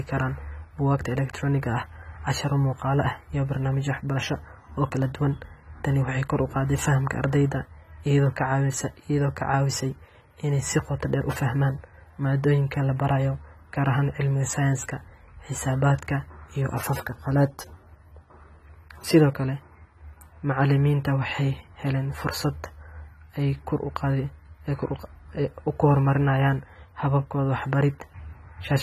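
Speech, with AAC compression damage throughout: nothing above 14 kHz, and dull, smeared, fizzy sibilants, likely from AAC-LC at a low bitrate near 32 kbps.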